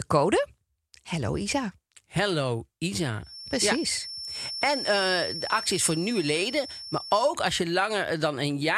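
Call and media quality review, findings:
Feedback whistle, 3.20 to 7.36 s, stopping just before "als je". Thin, steady tone at 5.4 kHz, about 10 dB under the speech, level swelling and fading slowly. Likely cause: the loudspeaker-to-microphone acoustic loop is sitting right at the onset of feedback, so one frequency keeps ringing without building up. Spectrogram: a single narrow horizontal line at 5.4 kHz across that span. Waveform: the tone sits about 10 dB under the speech envelope.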